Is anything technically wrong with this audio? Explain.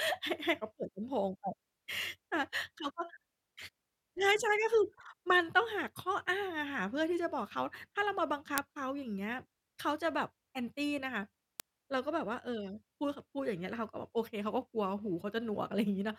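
Yes. Word clock ticks run through the speech from 1.02 s to 16.14 s. There are around ten sharp ticks, about every one and a half seconds. The receiver runs on its own clock, drifting by roughly 15 ppm. At each slip, one sample is dropped or repeated.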